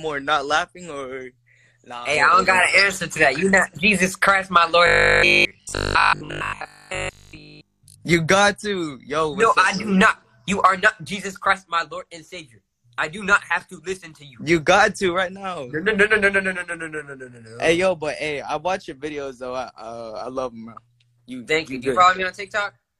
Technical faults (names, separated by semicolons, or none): robotic sound from repeated short buffers